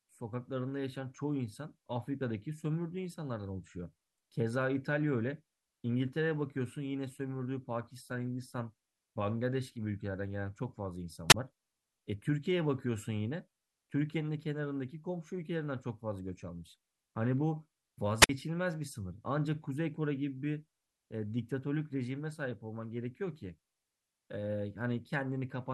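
At 11.29 s and again at 18.20 s the speech hits a wireless microphone squelch dropout. The radio signal fades, static rises briefly, then the receiver mutes for about 23 ms and 52 ms. Unlike a digital gap, each hole comes with hiss first.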